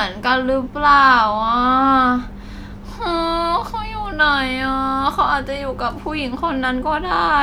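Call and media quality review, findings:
Nothing stood out on listening to this speech recording.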